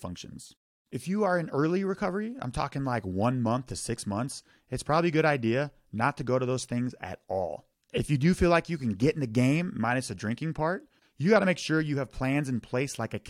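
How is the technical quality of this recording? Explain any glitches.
No technical faults can be heard in this recording. There are no glitches to explain anywhere in the speech.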